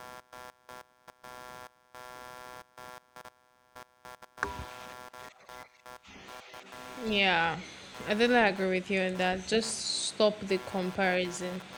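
Load changes in the computer are feeding into the audio path through a shared ground, so this speech recording carries computer activity noise from start to finish. As the processor, graphics card or mouse shifts its current draw, the ground reference moves, and that appears as a buzzing, chirping texture pulsing at around 150 Hz, roughly 20 dB below the speech. It rises and falls with the machine's workload rather than with anything in the recorded sound.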